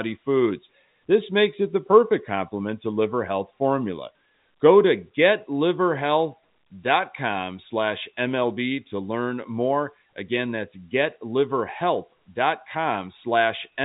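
Telephone-band speech; no technical faults can be heard.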